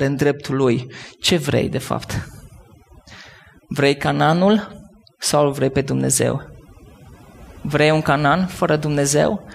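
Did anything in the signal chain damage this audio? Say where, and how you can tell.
Yes. Overdone noise removal in a noise reduction stage cuts any frequency band near its noise estimate throughout, leaving near-silent, twinkling pauses and taking quiet parts of the speech with it.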